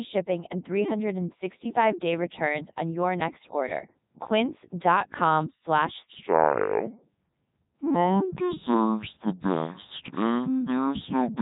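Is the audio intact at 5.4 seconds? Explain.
No. At 5.4 s, as throughout, the speech is heavily damaged by the Codec 2 vocoder at 3.2 kbit/s. It is rebuilt from sine waves using only pitch, voicing and envelope, so it sounds robotic and buzzy. A spectrogram shows neat harmonic stripes and nothing above 3.8 kHz.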